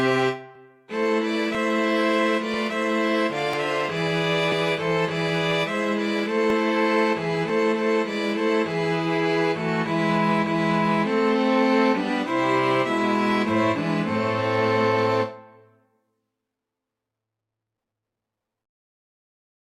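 At 0.55, 1.55, 2.54, 3.53, 4.52, 6.50 and 7.49 s there is an overlap between stream segments. Each cut falls at a boundary between 1-second segments whose time stamps overlapped, and the player trims roughly 10 to 15 ms of sound that was never actually duplicated. The waveform jumps forward, giving a small click or skip. Unlike a dropout, no silence is inserted. The sound simply lurches ahead, in a near-regular one-second rhythm.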